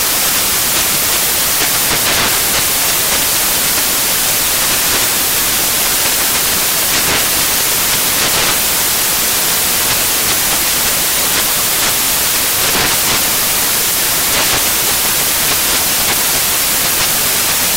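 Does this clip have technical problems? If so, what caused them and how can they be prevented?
Yes. From start to end the audio is buried in loud, hissing white noise. That is samples built from the wrong bytes: the reader assembles each sample misaligned or byte-swapped, so rapidly changing low bits dominate. Prevent it by declaring and checking byte order, sample width and frame alignment when reading.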